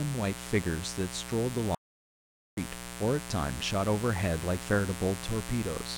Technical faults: mains buzz; audio dropout to silence

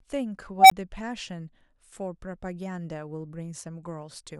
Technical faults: unstable filter

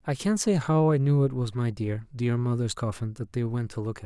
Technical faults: none

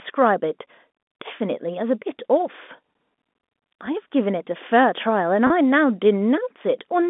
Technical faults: packet loss with pitch repetition

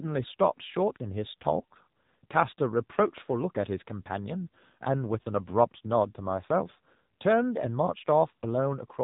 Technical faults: AMR narrowband mobile codec

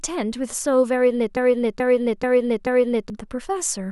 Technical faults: broken-record loop

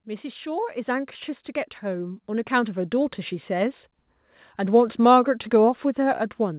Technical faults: automatic gain rising

